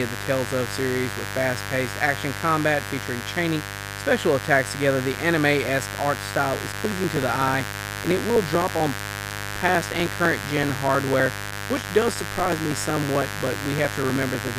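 A raspy mains buzz sits under the speech from start to finish, built on a 50 Hz fundamental. The sharp, spiky character suggests switching interference from a dimmer or rectifier, or an unshielded line, injecting pulses twice per cycle. That produces harmonics stacked well up into the kilohertz range. The buzz is strong, only about 10 dB below the speech itself, so it stays clearly audible even under louder passages.

From 6.54 s, just after "anime esque art", periodic USB or driver dropouts begin and run to 14.48 s. Every 0.063 s a sliver of audio, roughly a millisecond, is skipped outright rather than filled with silence. The cause is something blocking the audio path at a fixed interval. The result is a rapid, evenly spaced ticking, around 16 per second, that rides on the speech and disappears in the gaps.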